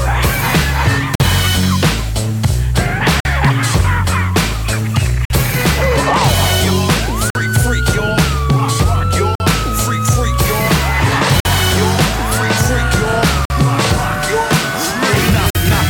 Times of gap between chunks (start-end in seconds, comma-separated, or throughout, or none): 1.15-1.20, 3.20-3.25, 5.25-5.30, 7.30-7.35, 9.35-9.40, 11.40-11.45, 13.45-13.50, 15.50-15.55